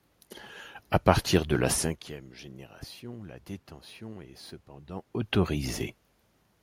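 No technical faults can be heard anywhere in this recording.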